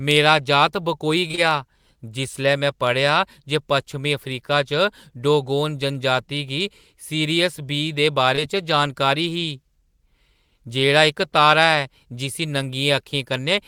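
Short concealed packet loss smears the speech from 1.27 to 1.39 s and again at 8.35 to 8.39 s: missing 20 ms packets were bridged by extrapolated sound, not silence or a click.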